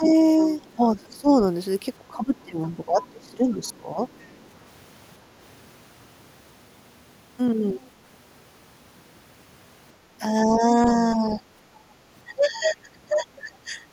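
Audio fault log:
0.0–1.32 s, 2.11–4.0 s, 10.47–11.4 s, 12.27–13.8 s: speech suppressed in double talk. The talker's level sags in patches, by about 15 dB at its deepest in three stretches and only about 5 dB in the 10.47–11.4 s one. The dips total around half a second in the first stretch and well over a second in the second. The likely cause is the echo canceller failing to tell the talker from the far-end voice arriving at the same moment, so it turned everything down together.
0.41–1.16 s, 3.02–4.45 s, 7.75–7.9 s: other side's voice leaking through. A faint second voice sits under the talker, roughly 25 to 30 dB down. The first two stretches overlap the suppressed passages, where both sides were talking at once. The last is only a brief scrap. This is likely loudspeaker playback reaching the microphone and surviving the echo canceller instead of being fully subtracted.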